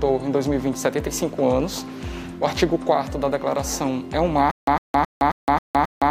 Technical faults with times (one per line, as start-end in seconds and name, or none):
4.51-6.10 stutter with silent gaps